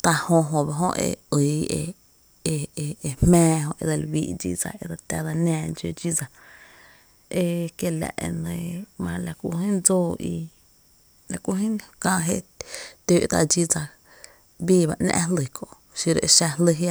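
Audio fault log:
Nothing stood out on listening to this speech recording.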